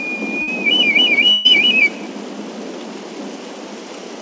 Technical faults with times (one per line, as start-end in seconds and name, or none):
0.42-0.49 burst of packet loss
1.31-1.47 burst of packet loss